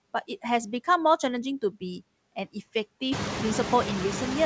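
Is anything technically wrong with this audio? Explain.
Yes. Throughout the speech, the background sinks in the pauses and swells back under each phrase. These are noise suppressor artifacts: frame by frame, bands judged steady noise are pulled down by about 18 dB, so the remainder pumps with the voice. The effect grows worse after roughly 3 s, when the room noise rises by about 21 dB to sit only about 6 dB below the speech.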